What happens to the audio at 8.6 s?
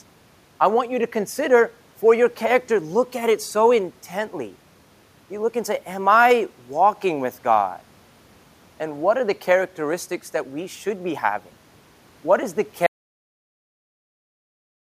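Nothing goes wrong at 8.6 s: the speech continues intact, with only the room's background noise sitting about 37 dB below it.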